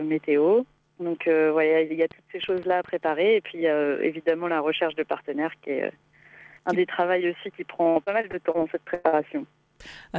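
A train of clicks runs from 2.11 to 3.09 s: about ten sharp pulses at an uneven pace of roughly eight per second, peaking at about the level of the audio itself. The likely cause is interference from nearby equipment or a faulty connection or power supply. From 7.84 to 8.56 s there is repeated packet loss with a robotic sound. Six separate gaps, the longest 64 ms, remove about 180 ms of audio. The receiver patches each one by continuing the previous sound, so roughly a quarter of that stretch is synthetic and comes out choppy. A burst of packet loss follows at 8.94 to 9.06 s. About 100 ms never arrived, and the decoder stretched the last sound across the hole while fading it down, so the material in between is gone when playback picks up again. Just after, at 9.08 to 9.15 s, comes a short concealed packet loss. Roughly 40 ms is missing, filled by a brief extrapolation that blends back in and is heard as a quick smear or wobble. 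The band stops at 8 kHz, which fits the G.722 wideband codec on the call path.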